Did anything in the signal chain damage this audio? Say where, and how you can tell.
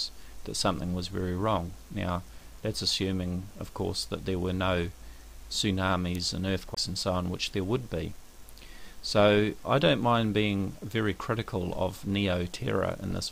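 Yes, at playback: a CD skip. Around 6.75 to 6.77 s you get a brief mute of about 20 ms, and then the sound carries on from a different spot. The laser has jumped to another turn of the disc's spiral.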